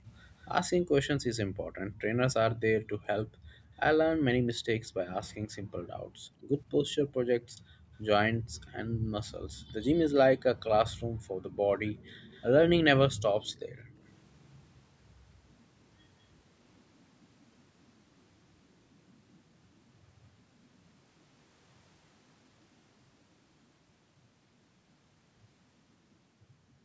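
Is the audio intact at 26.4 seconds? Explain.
Yes, the speech at 26.4 seconds is intact, with only the usual call microphone processing audible as a lack of deep bass and of content above 8 kHz.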